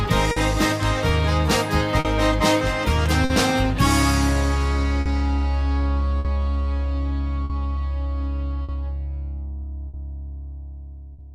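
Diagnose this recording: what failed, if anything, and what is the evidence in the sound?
Clock drift between sender and receiver at the jitter buffer: the sender's clock runs roughly 4% slow, so the receiver repeats short pieces, causing uneven timing hiccups throughout.

Scattered short gaps from network packet loss: about ten brief holes between 0.31 s and 11.2 s, the longest around 50 ms, each patched by extending the preceding sound.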